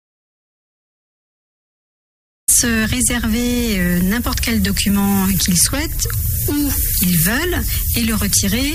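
Audio dropout to silence runs from the very start to 2.48 s: the clip opens already inside the gap, with dead silence and not even room tone, and the sound only comes in at 2.48 s, abruptly and mid-flow. That kind of silence points to the input having been lost, likely through a disconnected device, a failed link or a mute, while recording carried on writing silence. Whatever was happening during those first 2.5 seconds is unrecoverable.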